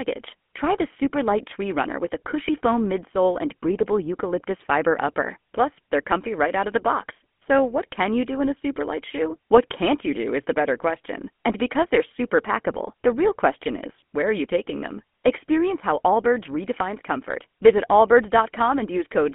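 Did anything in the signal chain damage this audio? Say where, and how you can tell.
Yes. GSM full-rate codec damage throughout, at the codec stage: pulse-driven vocal-tract modelling leaves buzzy, gravelly speech confined to roughly 200 Hz to 3.4 kHz, which fits a 13 kbps GSM link.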